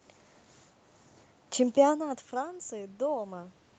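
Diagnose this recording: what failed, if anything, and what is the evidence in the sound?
Automatic gain rising in the call processing stage: at about 1.5 s the speech level drops by about 15 dB as the talker moves away, and from 1.57 s to 3.59 s the AGC slowly raises its gain by about 4 dB. Speech and room noise swell together.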